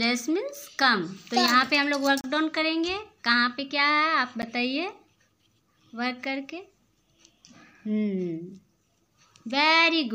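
Twice the output buffer was likely not filled in time, so blocks of samples went out as zeros: two blocks of digital silence, one from 2.21 to 2.24 s lasting 30 ms and a shorter 10 ms one at 4.42 s. The sound drops straight to nothing and returns with no fade. The longer gap comes across as a brief hole, while the 10 ms one is closer to a single tick.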